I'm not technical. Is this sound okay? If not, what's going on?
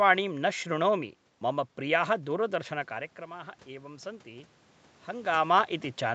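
No. From 2.5 to 4.57 seconds there is automatic gain rising. The voice drops at the microphone around 3 seconds, so the call's level control gradually turns itself up, and the voice and the room noise swell together over those two seconds.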